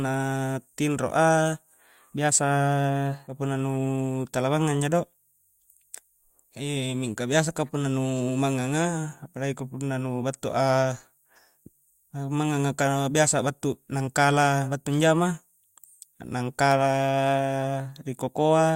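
A speech recording in which the sound jumps abruptly forward between 3.27 and 3.33 s, with a small blip at the join. This is a stream segment skipped: a segment of the stream likely failed to load, so playback continued from the next one, dropping a second or more of audio.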